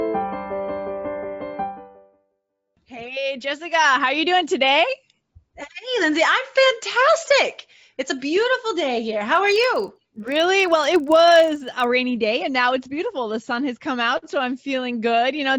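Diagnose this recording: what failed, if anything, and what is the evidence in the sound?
The sample-rate converter, likely upsampling from 16 kHz to 48 kHz in the driver or buffer stage, was restarted on every block. Each 40 ms block was resampled on its own, with no history from its neighbours, so every block edge carries a small error. From 9.36 to 11.84 s this produces a steady 25 Hz buzz of closely spaced ticks, one per block boundary, riding on the sound wherever signal is present.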